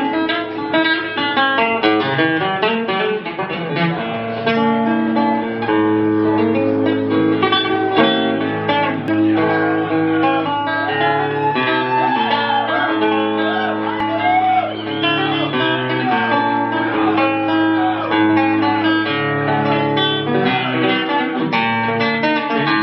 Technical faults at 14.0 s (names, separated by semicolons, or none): damaged data in a compressed stream